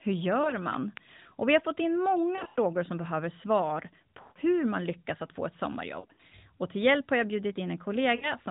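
Lost AMR speech frames at 0.42–0.55 s (20 ms, fitting one frame) leave a brief dip, as the decoder reuses the last good parameters with falling gain. At 0.74–0.99 s a loud pop comes as two pops about 10 dB above the speech, likely from a voltage spike such as a plug, switch, static or driver glitch. Further lost frames follow: after "vi har fått in" at 2.36–2.59 s (140 ms scattered over 200 ms, longest run 80 ms), after "som behöver svar" at 4.22–4.39 s (140 ms), after "lyckas att få ett" at 6.00–6.35 s (140 ms across 320 ms), and at 8.16–8.33 s (60 ms).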